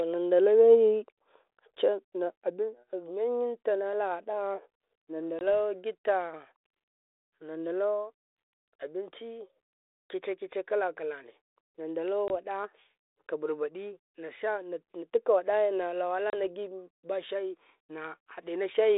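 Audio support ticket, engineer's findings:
Packet loss on an ADPCM call, three events: 5.39–5.51 s (20 ms gap), 12.28–12.31 s (20 ms), 16.30–16.33 s (30 ms). Hard-edged silent holes, each pointing to two or three lost packets on the G.726 32 kbit/s link (300–3700 Hz band). Speech resumes slightly distorted, settling within tens of milliseconds. Mechanism: decoder's adaptive predictor and step size desynchronised from the sender's across the gap.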